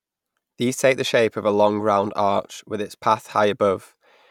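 Listening closely to the speech, nothing stood out as a technical fault at any point.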